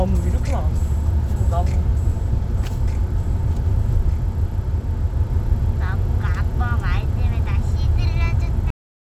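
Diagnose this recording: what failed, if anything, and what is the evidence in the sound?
A cut-off end, at the storage or buffer stage: at 8.70 s the sound stops mid-event and drops straight to digital silence with no decay, because the final buffers never got written.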